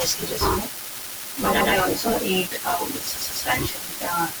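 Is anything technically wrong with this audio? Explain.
Yes. The speech stutters twice from repeated frames. At 1.60 to 1.72 s a 120 ms stretch plays again once. At 3.16 to 3.45 s a 144 ms block plays two extra times, adding 288 ms. Runs of compressed frames were sent or stored more than once, so the decoder replays them.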